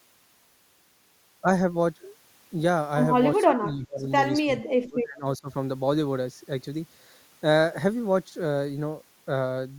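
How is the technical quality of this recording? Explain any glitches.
The recording has two stretches where the speech is pushed down, consistent with speech suppressed in double talk. From 3.44 to 4.09 s the level sags by up to roughly 20 dB, and from 4.44 to 5.49 s it drops deeper, around 30 dB. The likely cause is an echo canceller that, with both ends talking at once, could not tell this talker from returning loudspeaker echo and attenuated everything.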